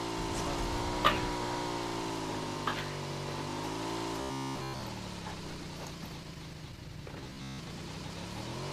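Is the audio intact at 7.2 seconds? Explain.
No. From 7.21 to 7.59 s the sound turns into a rigid, metallic buzz near 67 Hz: robotic sound from repeated short buffers. The likely cause is audio arriving too seldom, so a fragment of about 15 ms is looped to fill the gaps, covering roughly seven tenths of the span while the real audio is skipped. A waveform shows identical 15 ms cycles repeating; a spectrogram shows flat, evenly spaced harmonic stripes at multiples of 67 Hz.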